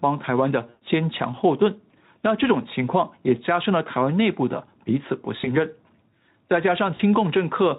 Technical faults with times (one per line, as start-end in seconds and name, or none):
0.69-0.85 VoIP packet loss concealed by the speech codec
5.41-5.52 VoIP packet loss concealed by the speech codec
6.95-7.00 VoIP packet loss concealed by the speech codec